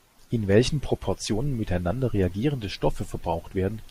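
No technical faults can be heard anywhere in the speech. There is nothing here to place on a timeline.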